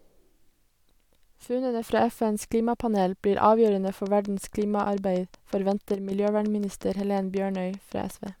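One channel drops out from 1.45 to 1.82 s: one stereo side likely went silent, so the mono sum falls abruptly by about 6 dB. A train of clicks runs from 3.68 to 8.29 s, starting just after "klimapanel blir": roughly thirty regular pulses at 5.4 per second, ticking about as loud as the speech and likely caused by interference or a faulty connection. One channel drops out again from 5.94 to 6.12 s, briefly cutting the level by about 6 dB.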